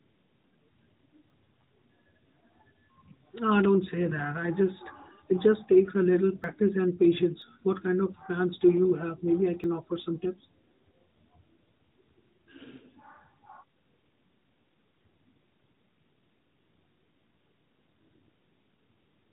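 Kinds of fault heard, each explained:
Dropped buffer (overrun): four jumps where the sound skips ahead with no gap, losing roughly 20 to 70 ms each, likely because samples were overwritten before being read. The waveform shows an abrupt splice, and the spectrogram a thin vertical line at each join.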